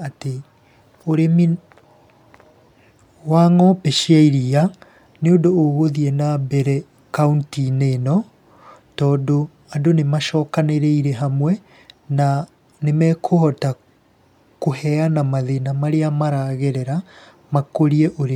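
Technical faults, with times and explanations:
Nothing stood out on listening to the speech in this recording.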